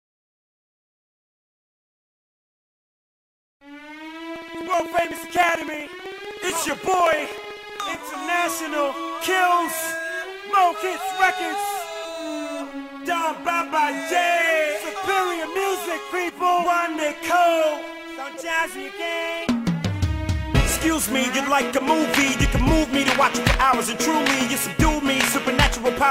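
From 4.36 to 7.95 s, something repeatedly stalls the USB link or audio driver every 63 ms, producing periodic USB or driver dropouts. Each stall drops around a millisecond of audio, which is skipped outright rather than filled with silence, so the waveform jumps abruptly at each gap. Roughly fifty of these splices land in that span, heard as an even train of ticks at about 16 per second, audible over the sound.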